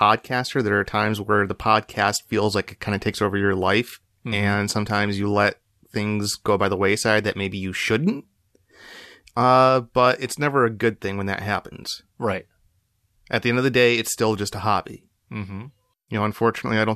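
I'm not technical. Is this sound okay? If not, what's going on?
Yes, the speech signal in this recording is technically sound, with no dropouts, interruptions or glitches anywhere in it.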